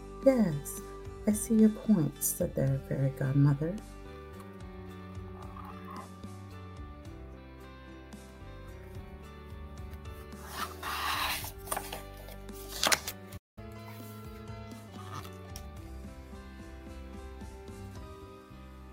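At 13.37 s the sound halts mid-flow and stays silent until 13.58 s, a playback stall, likely from the player running dry or being blocked. From 13.58 to 14.88 s comes catch-up at higher speed: playback runs 1.15 times fast, raising pitch about two semitones, then settles, unlike a steady pitch fault.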